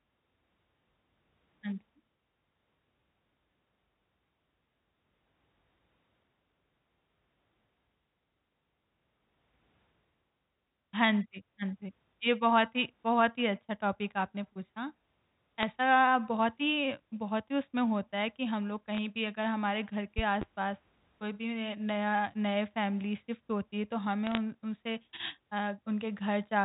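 At 15.62 s, bit errors on a digital phone line corrupt a few bytes of the 8-bit mu-law stream. Each flipped bit throws one sample to a wrong value, so a brief crackle of sharp ticks sits over the speech, which carries on unchanged. The same fault returns from 18.95 to 18.98 s. From 24.27 to 24.37 s it is longer and denser, with a heavier error rate, though still well under one percent, and it gives a rougher burst of crackle.

Between 20.18 and 20.45 s comes a loud pop, heard as two sharp pops about 10 dB above the speech, with the speech still running underneath. The likely cause is a sudden voltage step or pulse from a plug, switch, static discharge or driver glitch. The circuits after it shape that pulse into these pops.

The G.711 coding itself is audible only as the usual 4 kHz telephone band limit.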